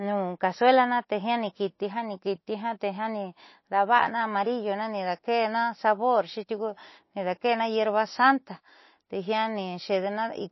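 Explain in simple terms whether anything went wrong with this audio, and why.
The speech sounds dull and watery throughout, with nothing above 5.8 kHz. This is likely MP3 compression squeezed hard enough to throw away treble and faint detail.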